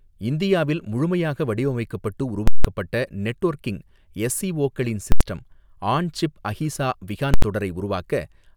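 Invalid numbers at full scale occur at 2.48 s after "இந்தியாவில் முழுமையாக வடிவமைக்கப்பட்டு" (170 ms), and at 5.12 s after "நெட்வொர்க்கிங் எஸ்ஓசிகளின்" and 7.34 s after "ஆன் சிப் அஹீசா" (85 ms each). A calculation produced invalid values that were pinned to the maximum, so each block sits flat at one extreme value, far beyond the speech's peaks. Each is heard as a loud pop at its start and end with no sound between. The waveform shows a flat slab far from zero, and the spectrogram shows bright vertical lines at each edge with an empty gap between them.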